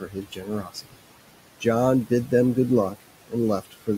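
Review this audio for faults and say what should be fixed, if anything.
The background breathes with the speech throughout: between phrases the room noise falls away, then swells back underneath each phrase. These are noise suppressor artifacts. The suppressor estimates the steady room noise, which sits about 16 dB below the speech, and pulls down each frequency band it judges to be noise, frame by frame, by up to about 18 dB. To prevent this, reduce the suppression depth or use smoother gain tracking, so the noise floor stays steady rather than pumping.

From 0.01 to 0.99 s, and again from 3.61 to 3.88 s, parts of the speech sound swallowed, with soft sounds and endings going faint. This is speech cut by the noise suppressor. The suppressor mistook low-level speech energy for background and lowered it along with the noise, by about 18 dB at worst in the opening stretch and about 14 dB near the end. 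Around half a second of the first span and roughly a tenth of a second of the second are affected. To prevent this, give the suppressor a more conservative speech-presence threshold, so quiet speech at onsets and tails is not classed as noise.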